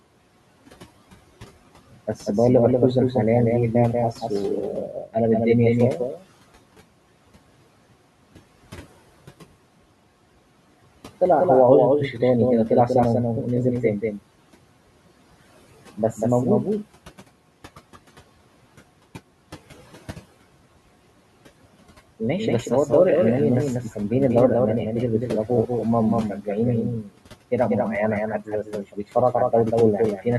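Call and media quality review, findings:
Doubled audio track throughout: a dry, full-band echo trails the speech by around 200 ms, roughly 5 dB quieter, with no room colour. Likely a second capture path or misaligned copy mixed in.

Noise suppressor artifacts throughout: background sinks between phrases and surfaces under speech. The suppressor pulls the steady noise, about 20 dB below speech, down by about 17 dB, frame by frame.

Speech cut by the noise suppressor at 4.86–5.15, 5.96–6.24, 27.01–27.19, 28.39–29.16 and 30.17–30.27 s: parts of the speech swallowed, dropping about 15 to 19 dB. The suppressor misjudges them as noise and attenuates them.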